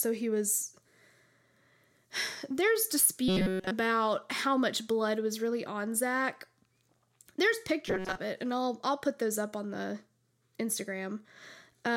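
From 3.28 to 3.72 s, just before "how much blood was", and again from 7.88 to 8.19 s, before "it and I'll I'll", you get robotic sound from repeated short buffers: a rigid metallic buzz at 188 Hz. The likely cause is a roughly 5 ms chunk looping while most of the real audio gets skipped.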